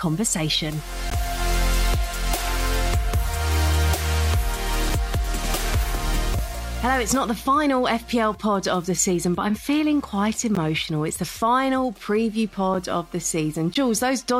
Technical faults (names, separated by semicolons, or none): block of digital silence